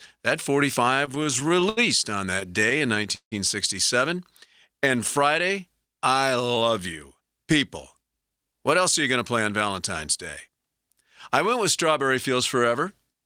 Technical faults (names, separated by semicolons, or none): repeated stalls (stutter); jitter buffer slow-down; jitter buffer speed-up